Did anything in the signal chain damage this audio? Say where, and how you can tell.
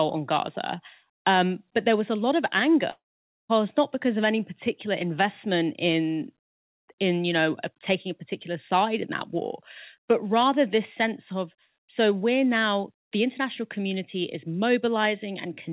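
Yes. At 2.9 s the speech decays into a fading buzz, then silence until 3.51 s, and resumes with a piece missing: likely a long network dropout.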